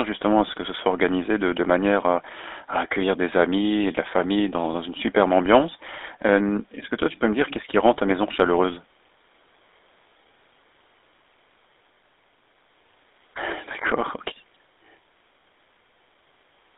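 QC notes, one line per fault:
Throughout, GSM full-rate codec: buzzy, gravelly speech confined to roughly 300 Hz–3.7 kHz, from pulse-driven vocal-tract coding consistent with the 13 kbps full-rate GSM codec.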